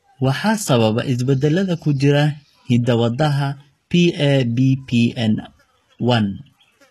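A speech recording that has likely passed through HE-AAC compression at a low bitrate, consistent with about 16 kbps, so its treble is rebuilt from lower bands rather than coded. Throughout, s sounds come out gritty and lispy, and nothing is present above 12.3 kHz.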